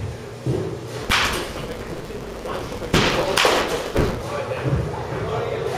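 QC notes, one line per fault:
1.02–4.23 s: block size mismatch (truncated). One stage passes longer blocks than the next stage reads, so the end of every block is discarded. The regular cut at each block edge produces a buzz at 172 Hz, which fits a 256-sample read size. Because part of each block is lost, the audio runs about 1.88 times faster yet stays near its normal pitch, since the surviving samples still play at the correct rate.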